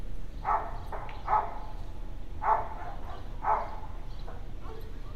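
Damaged data in a compressed stream causes two very short glitches in this recording of sounds, one at 0.92 s and one at 4.27 s, each heard as a brief chirp or blip. At those points the encoded data was corrupted, so the decoder could not read the frames correctly. It lost its place in the stream and had to search for the next valid frame header before normal playback resumed.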